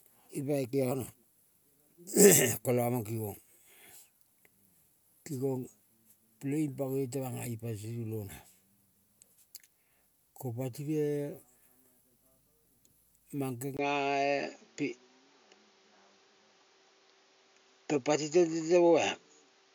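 At 13.77 s a gap of about 20 ms interrupts the speech. From there to the end the band stops at 7 kHz, the level shifts by roughly 5 dB, and a new noise floor sits roughly 40 dB below the speech. The likely cause is an input switched to a poorer device.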